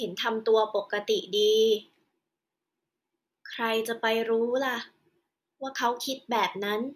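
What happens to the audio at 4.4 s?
Nothing goes wrong at 4.4 s; the speech carries on intact through that moment with no dropout, click or distortion.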